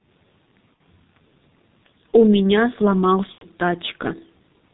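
Throughout, the speech passes through the G.723.1 codec at heavy damage, its sound consistent with a rate near 6.3 kbit/s. With nothing above 4 kHz and a slowly updated voice model, the speech sounds muffled and hoarse, and consonants are smeared.

VoIP packet loss concealed by the speech codec strikes from 0.75 to 0.81 s and again from 3.32 to 3.46 s, gaps that fit about 60 ms and 90 ms of missing audio. The decoder stretches its last pitch and filter with falling gain, so each gap becomes a fading buzzy tone or coloured noise, and the speech stays weak just afterward.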